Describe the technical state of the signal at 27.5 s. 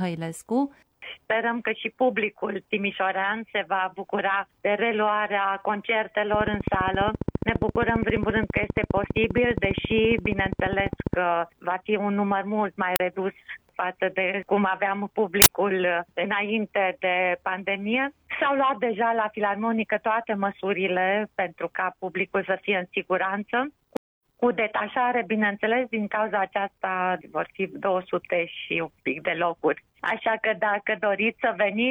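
At 27.5 s the signal is intact, with no audible fault at that moment.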